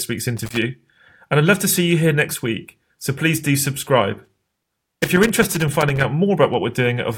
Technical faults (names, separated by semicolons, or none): loose connector crackle